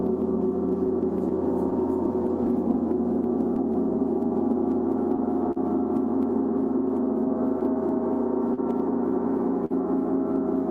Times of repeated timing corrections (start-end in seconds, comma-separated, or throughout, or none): 0.48-7.87